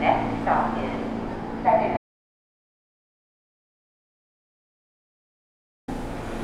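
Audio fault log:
1.97–5.88 s, audio dropout to silence: the input signal was likely lost, through a disconnected source or broken link, while recording carried on writing silence. The sound cuts off mid-flow and returns after 3.9 s of total silence with no background noise, so that stretch is gone.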